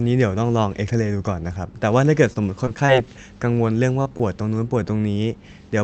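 From 2.33 to 3.09 s there is repeated packet loss with a robotic sound. Short holes keep recurring, the longest about 21 ms and about 60 ms lost in total. Each is patched by extending the preceding sound, so the speech turns choppy and robotic. Unlike a single dropout, the damage repeats across the whole stretch.

From 4.03 to 4.07 s comes a short concealed packet loss. About 20 ms of audio never arrived in time, so the receiver continued the previous sound and then blended back into the real signal. The result is a brief smear, and a small piece of sound is actually missing.

From 4.17 to 4.22 s there is a short stall from a late packet. The jitter buffer ran dry, so the last sound was held for about 24 ms until the packet turned up, and playback then resumed from the same point. Nothing is lost here, which sets it apart from the dropout just before. Instead, a sound lingers slightly too long.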